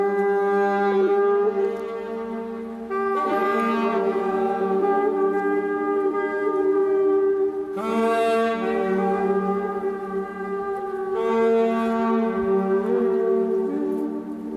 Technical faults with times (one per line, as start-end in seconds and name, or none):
none